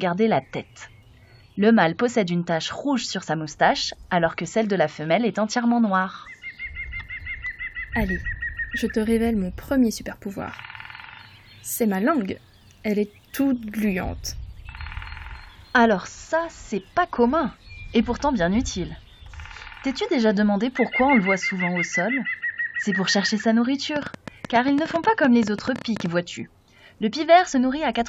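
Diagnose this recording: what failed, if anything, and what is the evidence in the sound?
A train of clicks runs from 23.96 to 26.07 s. About 11.5 pulses per second arrive at an uneven pace, some thirty in all, and they stand out roughly 10 dB above the sound. The cause is likely interference on the analogue wiring or a faulty connection or power supply.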